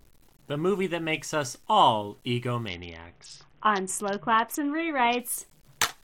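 Throughout the speech, quiet passages sound grainy, with distortion that follows the sound and noise about 40 dB below it. The likely cause is low bit depth without dither, with truncation to something like 10 bits. From 2.68 to 5.19 s the treble dulls and a gritty noise rises, then clears. This is a Bluetooth SBC bit pool drop: the link cut its bit pool, starving the top sub-bands and coarsening the rest, which fits a fall to roughly 60 kbps.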